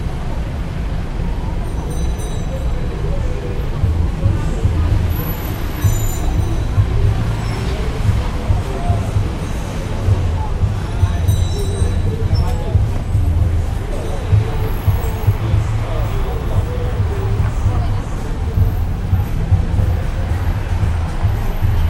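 Nothing in these everyday sounds stood out as a technical problem on listening.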